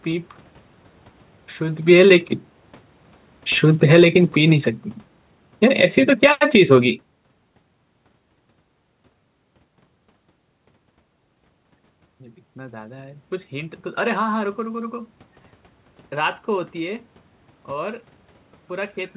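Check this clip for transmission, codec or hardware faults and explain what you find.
One fault is audible: automatic gain falling. From 3.63 to 6.90 s, the automatic gain control reacts to an input that is too loud or too noisy for its starting gain by easing its gain down about 7 dB, so the speech and the background room noise sink together. The audio is band-limited to below 4 kHz, which fits a narrowband G.711 mu-law call path.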